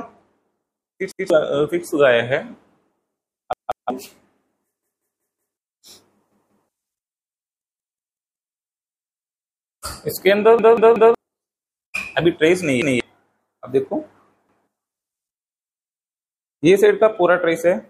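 Repeated buffer faults occur at 1.12–1.30 s, 3.53–3.90 s, 4.83–5.57 s, 6.32–6.69 s, 7.62–8.36 s, 10.59–11.15 s, 12.82–13.00 s and 14.49–14.68 s. Each time, fresh audio failed to arrive and the device replayed its last chunk, so a piece of about 186 ms, which fits an 8192-sample buffer, loops between two and five times with a hard join at every restart. The longest runs lose roughly 0.7 s of audio. Unlike an echo, the copies are identical and do not fade, and unlike a dropout there is no silence.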